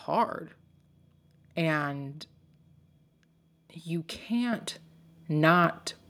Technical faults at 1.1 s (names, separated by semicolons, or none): none